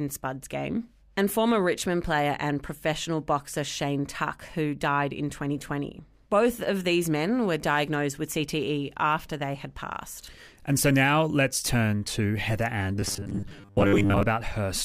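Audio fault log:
12.95 to 14.23 s, robotic sound from repeated short buffers: for about 1.3 s near the end, the speech hardens into a rigid, metallic buzz pitched at 100 Hz that only loosely tracks the words. The likely cause is new audio arriving too seldom, so the playback fills each gap by looping a 10 ms slice, matching that 100 Hz buzz, while roughly half the real audio is skipped and lost.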